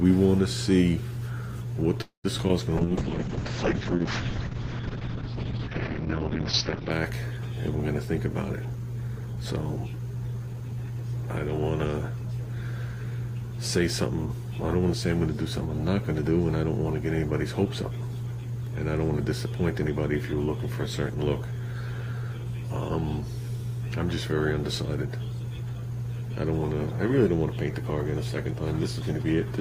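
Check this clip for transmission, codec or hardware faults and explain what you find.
Four kinds of transmission fault appear, all in the first eleven seconds.

From 2.01 to 2.26 s there is a call audio freeze. Packets were likely held up in transit, and the jitter buffer ran dry. The last sound is stretched into a fading buzz or hiss, with about 110 ms of near silence. The audio then resumes where it stopped, so nothing is lost.

Short concealed packet loss follows at 2.38 to 2.40 s and 2.48 to 2.51 s. About 20 ms and 40 ms of audio never arrived. The receiver patched each gap by extending the preceding sound. Each one is heard as a brief smear or wobble.

A call bitrate drop runs from 2.79 to 6.97 s. The encoder's rate fell from 48 kbps to 6 kbps and stayed at the bottom for about 4.1 s. The bandwidth shrank from 20 kHz to 6 kHz, so the sound turns muffled and rough.

Jitter buffer speed-up occurs at 8.65 to 9.34 s, at 115% speed, and at 9.76 to 10.69 s, at 109%. 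The buffer held too much audio. Short pitch-period chunks, roughly 100 ms in each stretch, were cut out. The sound hurries while the pitch stays unchanged.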